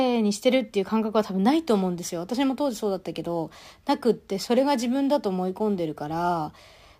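From 1.58 s to the end, the speech carries a crude rate conversion. A gritty, inharmonic fizz rides on the louder syllables and the bright consonants. It sits around 30 dB below the speech. The pattern fits a jump from 44.1 kHz to 48 kHz done by repeating the nearest sample, with no filter. Those repeats recur in a fixed cycle. They create shifted, inharmonic copies of the speech.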